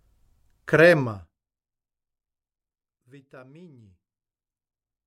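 From 1.00 to 1.44 s a fine ticking rides on a roughly 25 dB fall: zipper noise, from unsmoothed 1 dB gain steps, about fifty a second.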